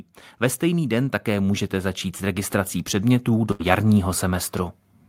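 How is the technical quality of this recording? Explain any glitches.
The recording has two audible technical faults: a gradual level rise and a short dropout from packet loss.

From 0.6 s to 4.56 s there is automatic gain rising. The gain control judged the input too quiet and increased its gain by about 9 dB, so speech and background noise swell together across those four seconds.

From 3.51 s to 3.62 s a burst of packet loss occurs. Packets arrived too late or not at all, and the receiver filled 82 ms by extending the last sound while fading it out, which gives a held buzz or a decaying hiss. Speech then resumes with about 80 ms skipped.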